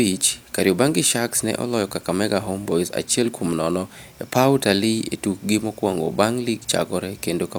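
No technical faults are audible.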